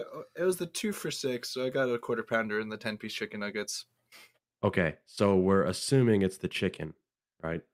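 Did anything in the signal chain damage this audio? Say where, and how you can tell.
No, nothing along the chain seems to have harmed this recording, so there's no stage to point to and nothing to track down.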